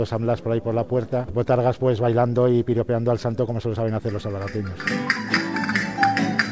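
At about 1.28 to 1.30 s there's a skip ahead. Playback jumps forward with no gap filled in, so roughly 0.7 s of sound just isn't there, and the two sides are butted straight together. That's what you get when a chunk of audio is dropped, either in transit or by the jitter buffer overflowing, while later audio is already queued. It sounds like an abrupt splice rather than a pause.

Right after, from about 1.38 to 4.38 s, the jitter buffer speed-up kicks in. The buffer was holding more audio than its target, so the receiver trimmed out short slices a pitch period or so long, over and over, to pull the delay back down. Playback runs at about 112 percent with the pitch unchanged, and around 0.4 s gets shaved off in total, so that stretch comes across as noticeably hurried.

Throughout, the call-path coding caps the sound at about 7 kHz, consistent with G.722 at 64 kbps, which gives the whole clip that dulled, bandwidth-limited top end.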